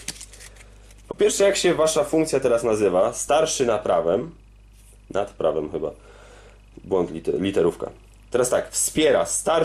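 Right from the start there's a steady low tone sitting under everything at 50 Hz, classic mains hum. It sounds like a ground loop or a nearby transformer leaking the power line into the signal path, and it never lets up for the whole clip. It's fairly quiet, somewhere around 30 dB down from the main audio, a dull, constant drone.

Then at about 1.11 to 1.15 s there's a short concealed packet loss. Roughly 20 ms of audio never made it to the decoder, so the receiver patched the hole by extending the last bit of sound it had for about 20 ms, then blended back into the real stream. What you hear is a brief smear or slight wobble, and any short, sharp sound falling in that window could simply go missing.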